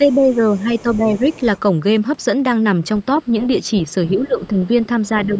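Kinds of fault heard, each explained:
Speech suppressed in double talk: The speech level dips in three stretches: across roughly the first 1.2 s, from 4.17 to 4.69 s, and from 5.13 s to the end. The deepest dip, about 10 dB, is in the middle stretch. The other two are shallower, about 5 dB. The likely cause is an echo canceller that heard both ends active at once, could not separate the near talker from loudspeaker echo, and turned everything down.
Other side's voice leaking through: A second, much quieter voice sits under the main speech in four places: 0.12 to 0.62 s, 0.78 to 1.4 s, a brief scrap at 3.43 to 3.48 s, and 3.87 to 4.09 s. It is strongest in the second stretch, about 20 dB below the speech, and elsewhere about 30 to 40 dB down. This is likely far-end audio that was played on a loudspeaker, picked up by the microphone and not fully removed by echo cancellation.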